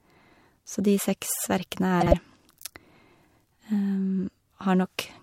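At 2.01 s, a brief garbled flutter runs until 2.14 s. This is frames out of order: two neighbouring blocks of about 52 ms each were swapped, so that stretch plays its halves exchanged, which fits two frames per block, and no time is lost.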